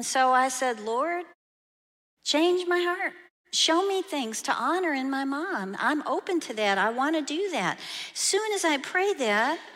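Nothing in this speech recording points to a technical fault, so there's nothing here to flag.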